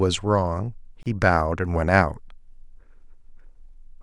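Separately encoded pieces were joined without trimming encoder delay and padding, leaving a gap at the join: about 30 ms from 1.03 to 1.06 s, its edges smeared.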